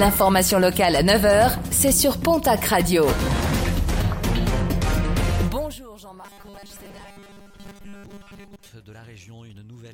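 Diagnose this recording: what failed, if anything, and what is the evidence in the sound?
Zipper noise, 5.41 to 5.85 s. During this stretch the level falls by about 25 dB, and a fine ticking rides on the sound as it drops. The fault lies in the gain or processing stage, where the level change is applied in discrete jumps of several hundred steps a second rather than as a continuous ramp. Each jump leaves a small discontinuity in the waveform, and together they produce the zipping texture while the level moves.

Robotic sound from repeated short buffers, 6.22 to 8.68 s. The sound turns into a rigid, metallic buzz at 200 Hz that still roughly tracks the underlying material. This points to the driver or buffer stage: new audio likely arrives too seldom, so the last short block is replayed in place of most of the missing audio. A buzz at 200 Hz fits a repeated block of 5 ms, since the repetition rate imposes its own fixed pitch.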